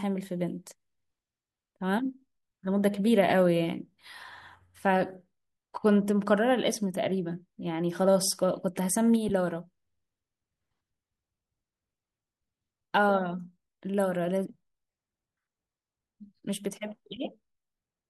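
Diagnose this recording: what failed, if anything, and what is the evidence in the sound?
Lost LE Audio frames in the Bluetooth codec stage. Brief noisy smears at 9.29 s and 17.16 s fit one concealed 10 ms LC3 frame each.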